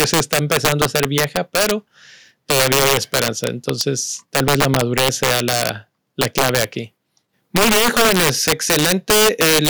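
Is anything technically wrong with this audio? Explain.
Yes. Integer overflow runs throughout this speech: driven about 8 dB past full scale, roughly 2 percent of samples exceed the integer limit and wrap to the opposite sign instead of clipping. Loud peaks become violent cracks, seen as full-range vertical jumps in the waveform and broadband spectrogram streaks.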